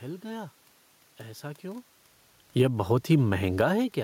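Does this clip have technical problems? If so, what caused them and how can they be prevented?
Yes. Automatic gain falling runs from 3.45 to 3.76 s. The gain control judged the input too loud or its background noise too strong and lowered its gain by about 3 dB, so the speech and the room noise sink together. Setting a fixed input gain with automatic gain control disabled prevents this.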